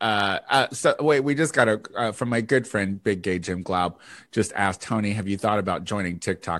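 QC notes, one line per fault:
No faults found in the speech. Nothing in the recording calls for a QC entry.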